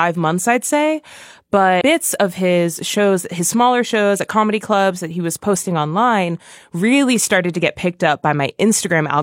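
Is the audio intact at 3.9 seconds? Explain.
Yes, at 3.9 seconds the audio is intact, with no dropout, click or other fault at that point in the speech.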